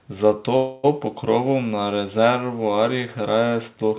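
A call audio freeze runs from 0.56 to 0.86 s. The speech stalls into a fading buzz for about 0.27 s, then resumes where it stopped with nothing lost, likely because delayed packets emptied the jitter buffer. The band-limited sound, with nothing above 4 kHz, fits a G.711 narrowband call path.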